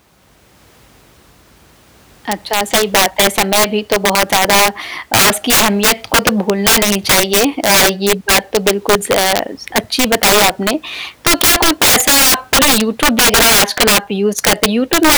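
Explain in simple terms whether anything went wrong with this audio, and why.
Something did go wrong, and it lasts the whole clip. The speech has an integer overflow fault. The signal was pushed far too loud, well past the highest number the audio can store. Instead of being capped at the top, those loud moments wrapped around to the opposite extreme. A small share of the sound, a few percent, goes over the limit. Each time it does, you hear a harsh crack, much sharper than ordinary distortion.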